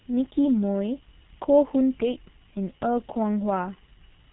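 From start to finish the speech carries G.723.1 codec damage, and it is heavy. Nothing passes above 3.9 kHz, so it sounds muffled. Unlike a plain low-pass filter, it is also hoarse with smeared consonants, because the slow voice model fits a bitrate near 6 kbit/s.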